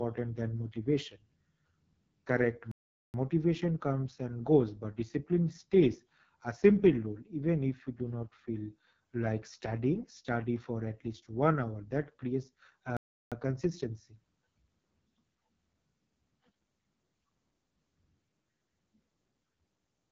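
Throughout, the AMR wideband (HD Voice) codec sounds rough and raspy with heavy damage. This fits its lowest 6.6 kbit/s mode, with nothing above 7 kHz. From 2.71 to 3.14 s and from 12.97 to 13.32 s, playback stalls: the speech halts abruptly for about 0.43 s and 0.35 s, likely because the player ran short of data.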